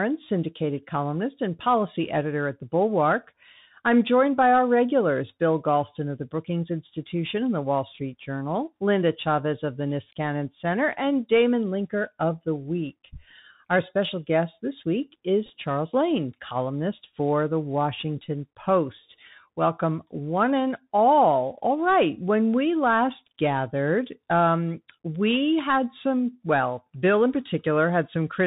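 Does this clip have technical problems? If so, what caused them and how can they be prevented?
Yes. Two problems can be heard.

The whole clip carries Bluetooth CVSD headset codec damage, and it is plainly audible. CVSD codes one bit per sample at 64 kHz, marking each step up or down, which fits a 64 kbps headset link. The step size adapts but lags behind fast changes. Nothing above 4 kHz survives, so the speech sounds narrow. S sounds turn scratchy. A grainy hiss sits under everything. Prevention: use a wideband headset mode or a wired microphone.

At 15.46 to 15.50 s, just after "special guest this week", a Bluetooth headset packet repeated fault appears. Packets between headset and phone were lost. The chip decoded the previous packet's bits again in their place. About 22.5 ms went missing, scattered over 37.5 ms, which fits roughly six lost packets. The longest run is only about ten milliseconds. 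So the 3.75 ms repeat gives a very brief buzz near 267 Hz, not a sustained one. Prevention: keep the phone close to the headset and away from wireless interference.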